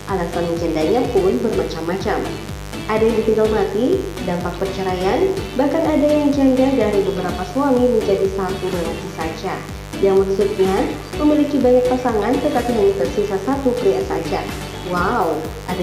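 Switching spikes from a dimmer, rectifier or broken shield are leaking into the signal path twice per 50 Hz mains cycle, producing mains buzz that runs throughout. Its harmonics stack up into the kilohertz range, giving a steady, raspy buzz sitting roughly 15 dB below the audio.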